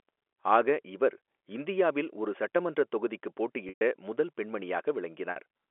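At 3.69 to 3.81 s the speech freezes into a buzzy held tone that fades toward silence before the signal returns; at 5.31 to 5.36 s a briefer hold occurs. This is packet loss with pitch repetition: 120 ms and 50 ms of telephone-band audio went missing, and the receiver filled each gap by repeating the last pitch period.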